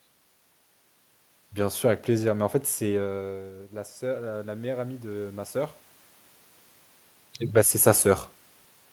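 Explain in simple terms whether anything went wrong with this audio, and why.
From 3.0 to 5.83 s there is automatic gain rising: after the talker drew back around 3 seconds, the level control slowly turned up voice and room noise together.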